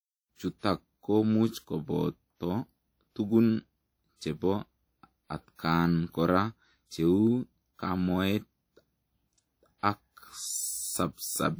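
From start to finish the speech carries a ringing, washy quality, with a hiss that swells and fades along with the voice, and the damage is plainly audible. The likely cause is WMA compression, a first-generation Windows Media Audio encode at what sounds like roughly 48 kbps. Its long transform blocks smear quantisation noise over tens of milliseconds around each sound, and weaker detail is dropped, though the band still extends to about 20.1 kHz.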